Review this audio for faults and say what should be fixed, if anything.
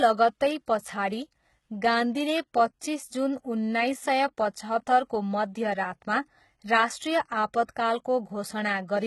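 HE-AAC compression, throughout the clip: the treble is likely rebuilt by spectral band replication, so s sounds come out gritty and metallic, with nothing above 11.8 kHz. The heavy damage points to a very low bitrate around 16 kbps. Encoding at a higher bitrate, or with a codec that codes the full band, would prevent it.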